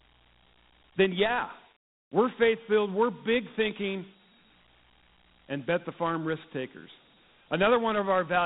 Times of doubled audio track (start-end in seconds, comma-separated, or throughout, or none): none